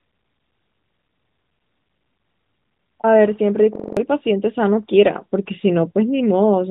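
From 3.76 to 3.97 s the speech locks into a system hang loop. A single 42.7 ms slice repeats five times, giving a rapid stutter at 23.4 Hz. That fits a 2048-sample buffer being replayed while the system stalled, and about a fifth of a second of speech is lost.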